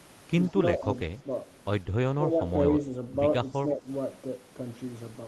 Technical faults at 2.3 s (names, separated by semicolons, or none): speech suppressed in double talk